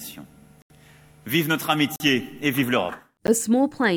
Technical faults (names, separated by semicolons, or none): block of digital silence